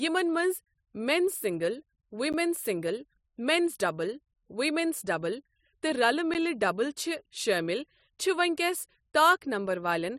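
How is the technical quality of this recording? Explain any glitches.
The speech is broken twice by a gap between chunks, at 2.33 s and again at 6.34 s. The audio was handled in pieces about 4 s long, and at each join roughly 12 ms of silence was inserted before the next piece began, probably from padding or a late start at playback. Nothing is cut from the speech itself, but each join leaves a brief, hard-edged hole where the sound drops out and snaps back.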